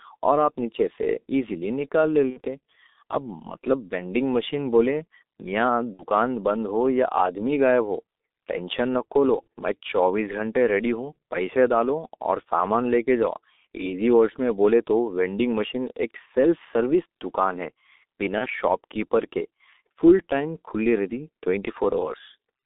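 Throughout, the speech sounds muffled and hoarse, confined to roughly 250 Hz to 3.7 kHz, with smeared consonants. This is heavy G.723.1 codec damage, consistent with its roughly 6.3 kbit/s rate.

At 2.30 s, and at 5.94 s just before "بند ہو یا آدمی", a fading smear lasts about 0.1 s. At 18.38 s, before "شاپ کیپر کے فل", a shorter one occurs. These come from VoIP packet loss concealed by the speech codec, which fits two, two, and one lost 30 ms frames, extrapolated by the decoder.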